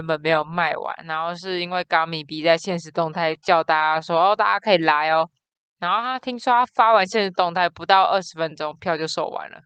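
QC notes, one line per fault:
Nothing to flag here; the speech comes across without any technical trouble.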